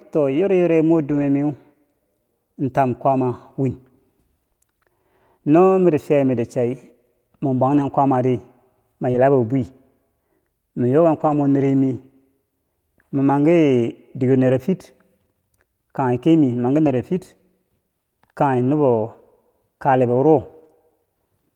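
Speech, affected by two related network faults. Lost packets rebuilt from error correction occur at 1.09–1.23 s, 7.69–7.83 s, 9.14–9.16 s, 11.16–11.34 s, 14.48–14.50 s, 16.86–16.88 s and 20.64–20.66 s. There is no gap, but those stretches, 20 to 100 ms long, sound rougher and noisier because the decoder played the low-bitrate copy carried in the following packet. Short concealed packet loss appears at 9.11–9.16 s and 20.68–20.71 s. In each case about 20 ms never arrived in time, and the receiver extended the preceding sound before blending back, leaving a brief smear or wobble.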